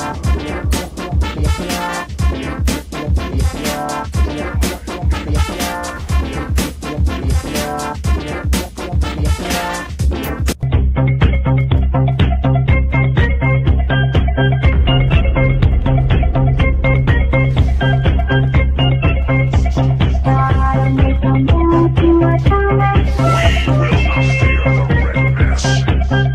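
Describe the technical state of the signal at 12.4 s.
At 12.4 s the signal is intact, with no audible technical fault at that moment.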